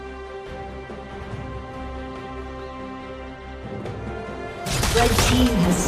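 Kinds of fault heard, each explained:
MP2 compression: heard throughout as a dull, gurgling, granular sound. Upper sub-bands are switched off and the remaining bands are coarsely quantised, likely from low-rate MPEG Layer II coding around 80 kbps.
DAB burbling: a brief burst at 4.36 s, where corrupted bits put short blips of noise into single sub-bands, which points to roughly one bit in a thousand being wrong.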